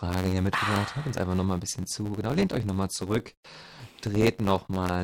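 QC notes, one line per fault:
Throughout: block size mismatch (truncated). Each block loses its tail because the reading stage takes less than the writing stage supplies, consistent with 512-sample blocks written. This produces a 91.9 Hz buzz at the block rate, and speech runs 1.07 times fast with its timbre kept.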